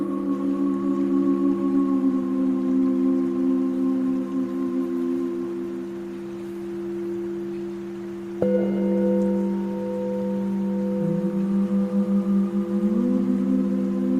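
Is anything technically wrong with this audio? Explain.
No, nothing in this recording points to a technical problem in how the signal was captured, processed or delivered.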